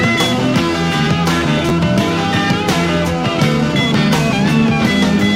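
At 1.69 to 1.71 s there's a brief chunks-out-of-order glitch: a 10 ms chunk landed one chunk late and plays after its neighbour, so two slices are swapped. Nothing's missing, but the three hard joins give a tiny jumbled stutter.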